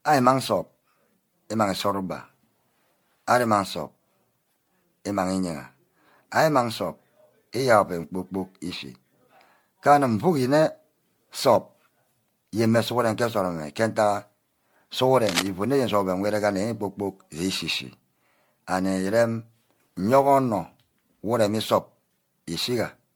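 From start to finish the speech carries generation loss. It sounds swirly and hollow, and consonant attacks are smeared. The damage is heavier than one lossy pass would leave. This is likely repeated MP3 coding, around ten passes, at a rate that fits 96 kbit/s. Each pass quantises again on a shifted frame grid, so noise and spectral holes pile up. Nothing is heard above 19.9 kHz.

From 15.24 to 15.48 s, cable scratch noise cuts in. A dense, ragged burst of scratching and rustling lies over the speech for about a quarter of a second. It is loud, only a few decibels below the speech itself. A worn cable or connector being moved is the likely cause. Its contact resistance jumps about rapidly and injects uneven noise into the signal.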